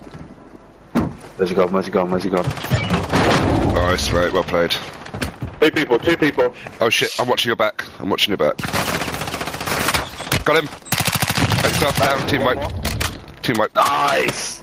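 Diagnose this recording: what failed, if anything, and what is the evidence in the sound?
Gain pumping runs through the whole recording, with a level swing of around 10 dB. Loud and quiet passages sit unnaturally close together, giving a squashed, breathing texture. The likely cause is input gain set far too high, with a fast limiter or compressor in the capture or call-processing stage clamping each peak and then releasing, dragging the background level up and down with it.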